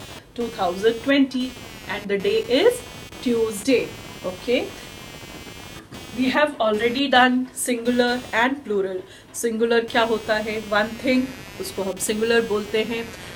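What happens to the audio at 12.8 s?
At 12.8 s, computer activity noise runs underneath, as it does throughout. It's a buzz pulsing at around 200 Hz, roughly 20 dB below the signal, from processor or graphics load disturbing the shared audio ground.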